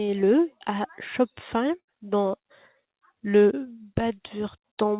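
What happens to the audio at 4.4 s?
Nothing goes wrong at 4.4 s: the speech runs on intact through that moment, carried by the call path's narrowband coding with nothing above 4 kHz.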